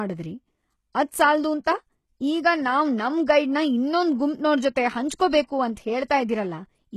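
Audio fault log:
Throughout, likely HE-AAC compression: treble rebuilt from lower bands copied upward sounds gritty and lispy on s sounds, stops at 12.3 kHz, fitting about 16 kbps.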